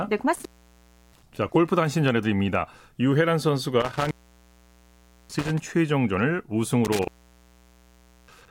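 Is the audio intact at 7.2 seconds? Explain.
No. At 7.2 seconds the speech falls inside an intermittent contact fault running from 6.85 to 8.48 s. A loose connection opens for about 1.2 s, so the signal drops out with crackle at the break and leaves faint hiss while the line is open.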